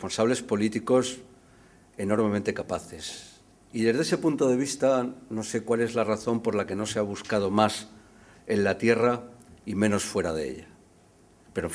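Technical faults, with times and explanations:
Nothing stood out on listening to this recording.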